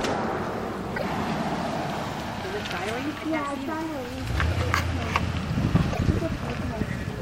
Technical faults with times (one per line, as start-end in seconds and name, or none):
0.95-1.04 broken MP3 bit reservoir
5.92-6.00 broken MP3 bit reservoir